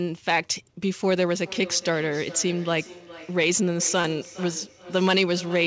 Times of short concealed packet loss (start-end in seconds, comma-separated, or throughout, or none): 4.01-4.07